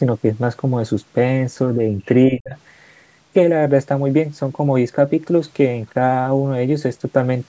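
From 2.29 to 2.55 s, the speech suddenly sinks, falling by about 35 dB at its deepest before recovering. The dip lasts roughly a third of a second. The level drops steeply. This is likely speech suppressed in double talk. Both ends spoke at once, and the echo canceller mistook this talker for loudspeaker echo and pushed the level down. The call processing's band limit leaves nothing above 8 kHz throughout.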